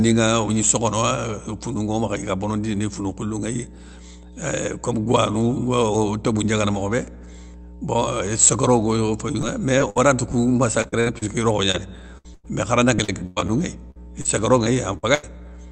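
A steady low drone at 60 Hz sits under the speech from start to finish, roughly 15 dB below it. This is mains hum: a ground loop or nearby transformer leaking the power-line frequency into the signal.

From 9.41 to 10.00 s the speech turns choppy, with four brief holes (the longest about 55 ms). From 10.82 to 15.25 s this returns more heavily, with eighteen holes of up to about 0.1 s. This is repeated packet loss heard as robotic sound. Packets from the call arrived late or not at all, and the receiver filled each hole by stretching the last sound it had, so the speech sounds synthetic and has pieces missing. Through the call path the speech extends only to about 8 kHz.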